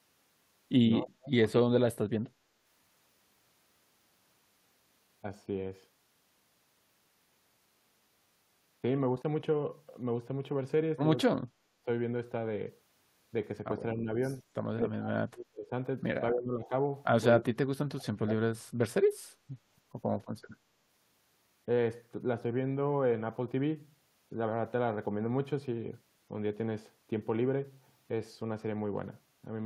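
Speech suppressed in double talk at 1.0–1.74, 11.27–11.87, 13.95–14.09, 14.43–14.49, 14.82–15.72, 16.32–16.73, 17.36–18.36 and 19.14–19.45 s: the speech dips, by about 10 dB to about 40 dB, or drops out in pieces, likely an echo canceller turning this talker down while the far end also spoke.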